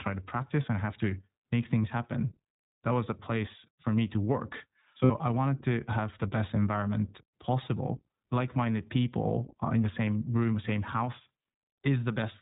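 From start to finish the speech passes through the iLBC codec, a narrowband VoIP coder that removes everything above 4 kHz and leaves the speech plainly rough and synthetic in texture. The coarseness fits a bitrate near 15 kbps with 20 ms frames.

Lost iLBC frames appear at 1.83 to 1.86 s and again at 5.04 to 5.12 s. In each gap the decoder repeats the last pitch cycle mixed with noise, producing a held, buzzy vowel. The first gap points to a single lost frame and the second to about three. Because each frame decodes independently, the speech recovers immediately afterwards.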